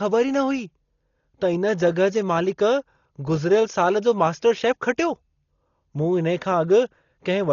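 Throughout, the speech is dull and cut off above 6.9 kHz, likely from heavy Dolby Digital compression; refilled dither noise flutters roughly around tones, unlike a clean low-pass.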